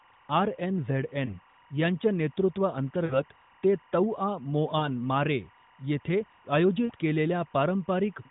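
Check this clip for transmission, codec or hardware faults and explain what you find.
Two faults are present: a continuous timecode bleed under the speech, and four short runs of lost AMR speech frames on a narrowband mobile path, whose light coding can be heard as a 4 kHz upper limit.

Timecode bleed runs throughout as a steady chirping warble flipping between roughly 1 and 2 kHz, around 30 dB below the speech. Linear timecode at 23.976 frames per second is leaking from an adjacent track or cable, its square-wave bits switching between the two pitches.

Lost AMR speech frames occur at 1.26–1.38 s, 3.06–3.20 s, 4.78–4.88 s and 6.86–6.93 s, each heard as a brief smeared dip or warble with the voice returning rough for a moment. Frames failed their checks over the radio link, so the decoder repeated the last good pitch and vocal-tract settings at falling gain. The first gap fits one 20 ms frame, the others two.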